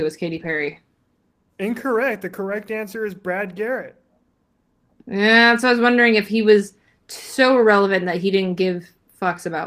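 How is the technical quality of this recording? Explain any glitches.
The recording has one kind of glitch: lost packets rebuilt from error correction, at 0.31–0.77 s (about 240 ms rebuilt, which fits a run of around a dozen packets), 2.49–2.51 s, 5.35–5.37 s and 8.43–8.45 s. In each case, packets went missing, and the decoder played low-bitrate backup copies carried in the following packets. There is no gap, but those stretches sound briefly rougher and noisier.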